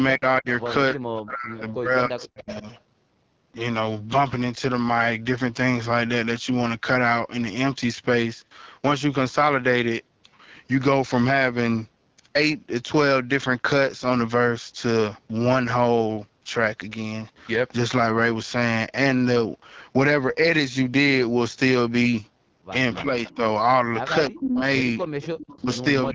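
The whole clip carries the AMR wideband (HD Voice) codec at 8.85 kbit/s, one of its two lowest rates, so the speech sounds plainly rough and raspy, with a hissy, noise-filled top end above 6.4 kHz rather than real detail.

From 0.16 to 2.66 s the speech keeps dipping, thinning and cutting out in pieces, about 1.5 s in all and down by roughly 40 dB at worst. That's speech suppressed in double talk, likely the echo canceller ducking everything while both sides talked. It returns at 23.02 to 23.41 s (about 15 dB) and 24.29 to 26.15 s (about 30 dB, around 0.7 s affected).

Echo leak turns up at 0.29 to 0.63, 1.57 to 2.27, 22.97 to 23.36 and 25.01 to 25.79 s: a faint copy trailing 296 ms behind, about 20 dB down (about 15 dB at 23 s). It's likely loudspeaker pickup the far end's canceller missed.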